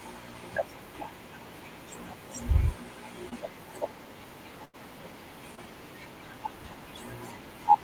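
A speech recording with three dropouts from packet loss. Two are short concealed packet loss, at 3.29 to 3.33 s and at 5.55 to 5.59 s. In each, about 20 ms of audio never arrived in time. The decoder filled the gap with roughly 18 ms of sound extrapolated from what came just before, then blended back into the real signal. Each event is heard as a brief smear or wobble. The longer event is a burst of packet loss, from 4.65 to 4.75 s. Here about 80 ms went missing in a row. The receiver stretched the last sound across roughly 83 ms and faded it as the gap went on. This produces a held buzz or fading hiss. Then the speech picks up further along, with the lost stretch simply gone.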